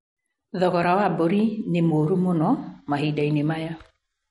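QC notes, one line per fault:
Throughout: MP3 compression. The speech has a watery, swirling texture and nothing comes through above about 11.2 kHz, so the top end sounds dull and s sounds turn metallic and chirpy, with consonant attacks smeared. This is likely a low-bitrate MP3 encode, in the region of 48 kbps. Short of bits, the encoder cut the treble at a fixed point and dropped weak frequency components, which flicker on and off from frame to frame and make the damage plainly audible.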